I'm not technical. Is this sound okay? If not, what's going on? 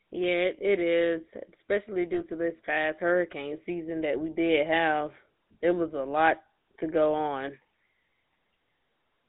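No. The whole recording has gone through the old GSM full-rate codec, the system early mobile phones used. It rebuilds the voice from a rough model driven by regular pulses, so speech sounds buzzy and gravelly, and nothing above about 3.7 kHz gets through. Ordinary muffling sounds dull, but this sounds rough.

There are also lost GSM frames from 2.14 to 2.21 s, between "it is especially" and "to this past hurricane". One piece of sound went missing, and the phone filled the gap by briefly repeating the previous sound, which gives a short metallic ring rather than a silent gap or a click.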